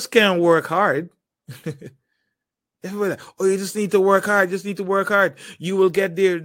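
From the start to 2.39 s, the speech carries a rough, metallic edge: periodic clock jitter, the converter's clock shaken at about 100 Hz, spraying sidebands around each component.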